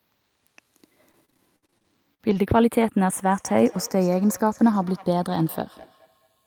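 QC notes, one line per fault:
Throughout: channels drifting apart. The left and right channels behave as if recorded on two devices whose clocks disagree by roughly 50 parts per million, so the offset between them keeps growing and reaches about a third of a millisecond by the end. Summed to mono, that tiny and changing delay creates comb-filter notches that creep slowly across the spectrum, giving a gradual flanging colour to the speech.
1.11 to 2.90 s: repeated packet loss (robotic sound). Within this span the audio drops out in a rapid series of short holes, the longest about 60 ms, with around 17 percent of the stretch patched rather than real. Each hole is filled by extending the preceding sound, and the next hole arrives before the speech recovers. The result is choppy, with a robotic edge and fragments missing.
3.28 to 6.46 s: feedback echo between two devices. From here to the end, the speech returns as a repeat at an interval of roughly 200 ms, peaking at about 23 dB below the direct speech. 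The pattern fits two devices in the same room on one call: one plays back what the other's microphone sent, that microphone picks it up again, and neither echo canceller removes sound from the other device. Successive returns become thinner and more ringing.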